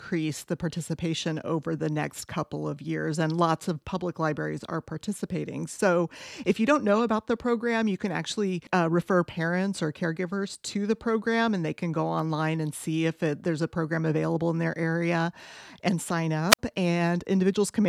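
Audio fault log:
16.49–16.59 s, wireless microphone squelch dropout: the radio link from the FM mic fades, you get a quick lift of hiss, then the receiver's squelch shuts the output for about 54 ms. That leaves a short hole of near silence before the speech comes back.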